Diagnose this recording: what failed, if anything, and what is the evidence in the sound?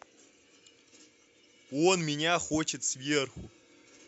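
Nothing failed in this recording, and the sound gives no evidence of any fault.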